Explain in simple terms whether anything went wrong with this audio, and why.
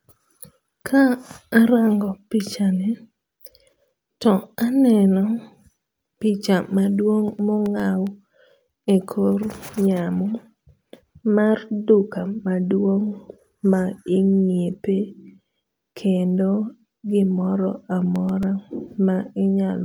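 Two bursts of CD scratch ticks occur, from 7.39 to 8.07 s and from 18.16 to 18.84 s, each a run of six clicks at about nine per second. A flaw on the disc ruins data once per rotation, and the player patches each gap, leaving a tick a few milliseconds long.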